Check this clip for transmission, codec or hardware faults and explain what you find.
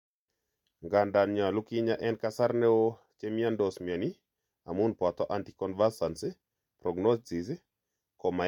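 No faults were found in this speech clip.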